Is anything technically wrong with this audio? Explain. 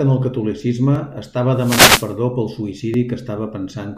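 Yes, two things are going on in this speech clip.

First, there are tiny skips at 0.95, 1.95 and 2.94 s, almost exactly a second apart. Each drops only a few milliseconds, and the audio on either side is butted straight together, so you get a small jump or tick rather than a gap. That regular one-second spacing points to audio missing between chunks, likely a recorder or processor losing a sliver each time it closes one block and starts the next.

Second, from 1.54 to 2.16 s there's a wireless microphone noise hit, a swishy burst of static laid over the speech for about 0.6 s. That's what an analogue FM radio mic does when reflections cancel its signal. The receiver's own noise climbs as the signal fades, and in the deepest part it turns crackly and masks the voice. The 1.95 s skip lands inside this burst.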